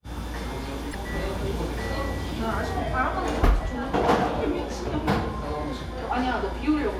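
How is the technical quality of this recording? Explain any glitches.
There is one glitch. At 0.90 s, damaged data in a compressed stream produces a brief glitch lasting about 40 ms. Corrupted bytes make the decoder lose sync until it finds the next frame header.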